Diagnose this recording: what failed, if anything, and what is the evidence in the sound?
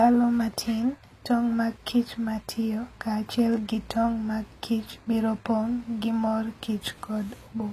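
The fault sits at the codec stage, where HE-AAC compression is the likely cause, and the damage is plainly audible across the whole speech recording. Sibilants come out gritty and metallic, and the brightness above them sounds synthetic. The treble is being rebuilt from copied lower bands instead of coded, which fits a bitrate near 24 kbps. On a spectrogram the top band looks smeared and blocky, with harmonics misaligned across the crossover and nothing above 14.9 kHz.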